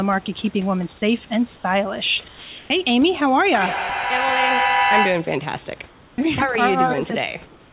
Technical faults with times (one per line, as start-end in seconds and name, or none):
1.56-1.64 comfort noise in place of the background
2.28-2.70 sound dropped by the voice detector
3.54-5.46 feedback echo between two devices
5.88-6.18 comfort noise in place of the background
6.13-6.18 onset clipped by the voice detector
7.46-7.73 comfort noise in place of the background